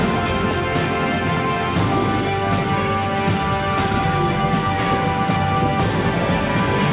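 Nothing technically wrong can be heard here.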